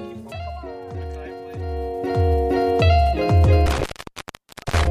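Intermittent contact from 3.66 s to the end: a loose connection opens for about 929 ms, cutting the sound out with crackle at the edges and faint hiss beneath. Broken MP3 bit reservoir at 4.61–4.64 s: a short glitch spanning roughly one 26.1 ms frame, likely from a frame reading borrowed bytes that no longer belong to it.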